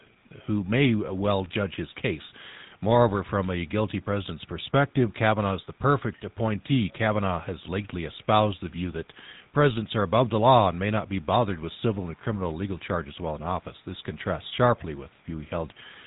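From 0 to 0.14 s there is a very faint delayed copy of the sound, about 285 ms behind, most likely an echo leak from a loudspeaker echo canceller letting some playback through. On a spectrogram it appears as a weak, thin shadow trailing the main energy.

Throughout, the GSM full-rate codec damage is plainly audible: a buzzy, gravelly roughness from the pulse-driven vocal-tract model, consistent with a 13 kbps stream. A spectrogram shows a hard ceiling with nothing above 3.8 kHz and coarse, grainy harmonics.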